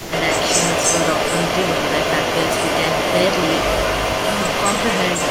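At the very start, from 0.0 to 0.12 s, the speech dips by roughly 15 dB for about a tenth of a second, likely speech suppressed in double talk: an echo canceller, faced with both sides at once, ducked the near talker too. The waveform shows a brief pinched envelope, and the spectrogram a faint, thinned patch.

Through the whole clip, from 0.0 s to the end, a second copy of the speech trails the original by about 204 ms at roughly the same level, likely an echo leak where a loudspeaker's pickup escaped cancellation and returned. The spectrogram shows each harmonic pattern repeated about 0.2 s later, and the waveform's syllable envelopes smear into doubled bursts.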